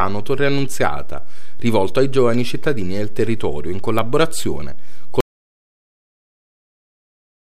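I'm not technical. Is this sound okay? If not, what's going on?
No. There are two problems. The first is a DC offset, present for the whole clip. The recorded signal sits off its centre line instead of swinging evenly around zero. You can't hear this as a hum or buzz, which is what separates it from mains hum. It quietly wastes some of the room the recording has before it distorts, and it can cause small clicks when the sound is cut or faded.

The second is an audio dropout to silence, starting at about 5.2 s and lasting to the end. The sound stops abruptly and nothing comes back. The silence is total, with no faint background hiss or room noise at all. That is what tells it apart from a quiet pause or a fade-out. Whatever happened after 5.2 s was never captured. The likely cause is that the input was lost, for example a disconnected microphone or a muted channel, while recording carried on.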